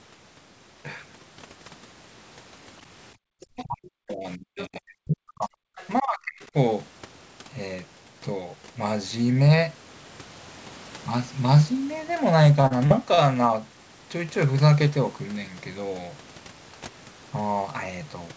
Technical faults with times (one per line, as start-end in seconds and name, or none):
3.15-3.34 background gated by the echo canceller
3.41-3.63 other side's voice leaking through
3.57-5.60 speech suppressed in double talk
4.58-4.65 other side's voice leaking through
5.76-5.88 other side's voice leaking through
6.01-6.55 speech suppressed in double talk
6.41-6.45 other side's voice leaking through
12.44-13.21 repeated packet loss (robotic sound)